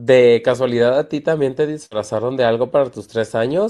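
A speech clip with a burst of packet loss from 1.85 to 1.93 s. The receiver stretches and fades the last sound for 57 ms. About 60 ms of speech never arrives.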